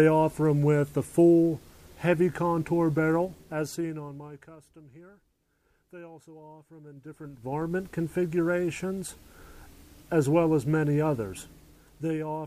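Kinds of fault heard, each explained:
Zipper noise: Between 6.87 and 7.80 s the level changes by roughly 25 dB. It does not glide. It moves in 2 dB steps, about ten each second. Nothing smooths the jump from one step to the next. So each step puts a small click into the signal. Together the clicks make a fast ticking, like a zip being pulled. It lasts as long as the level is moving and stops when the level settles.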